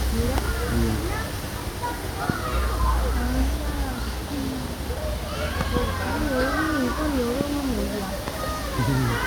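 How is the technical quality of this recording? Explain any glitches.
The recording is marred by five loud pops, at 0.38, 2.30, 5.61 to 5.79 (a double pop), 7.41 and 8.28 s. Each is about 15 dB above the sound, likely from a voltage pulse such as static or a switch. The audio carries on underneath, unlike a dropout click, which leaves a gap.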